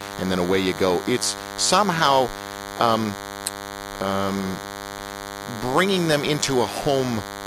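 From start to finish, a thin, steady buzz sits under the speech at roughly 10 dB below it: DECT cordless phone buzz. A nearby handset or base station transmits a brief radio burst every 10 ms, and the audio circuitry rectifies those bursts into a 100 Hz tone packed with harmonics. Mains hum at 50 or 60 Hz is rounder and lower; this buzz is edgier and more rasping, with its fundamental at exactly 100 Hz.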